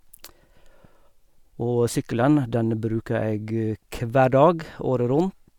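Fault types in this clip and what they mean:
No fault types are present in this clip.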